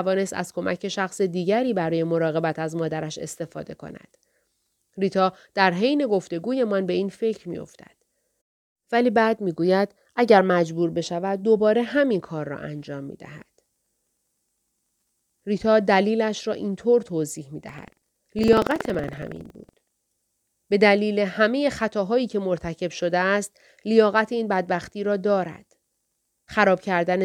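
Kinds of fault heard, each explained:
buffer tearing: a robotic 21.5 Hz rattle, fitting a 2048-sample buffer whose writer and reader have slipped, splicing in slices of audio a tenth of a second old.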